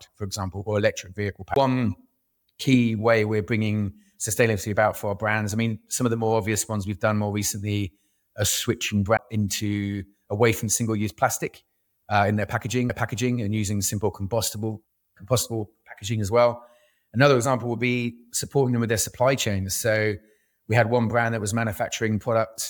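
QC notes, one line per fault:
1.54–1.56 s, CD skip: right after "example or electric vehicle" there's a tick and a dropout of roughly 20 ms. The laser jumped to another turn of the disc spiral, so the player muted briefly and picked up from a different spot.
9.17 s, CD skip: the same click-and-jump between "more recently are switching" and "into away from", with a mute of about 15 ms before playback resumes off position.
12.89 s, CD skip: a tiny gap of just a couple of milliseconds between "plastic uh in their" and "and using simple compostable". It's the same spiral-jump mechanism, but the mute is shortest here.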